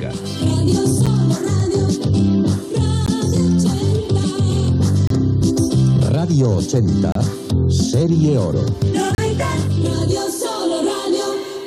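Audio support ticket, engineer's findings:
Gap between stream segments at 1.06 s, 3.06 s, 5.07 s, 7.12 s and 9.15 s. Hard-edged silent holes every 2 s, growing from 9 to 15, 28, 30 and 32 ms. Segment timestamps leave space at each 2-s boundary, which the player fills with silence. Nothing is lost, only delayed.

Dropped buffer (overrun) at 5.42 s and 8.82 s. Abrupt jump in the sound and no silence, skipping ahead about 10 ms. Likely capture-side: samples not read before the hardware overwrote them, so the surviving audio is spliced directly together.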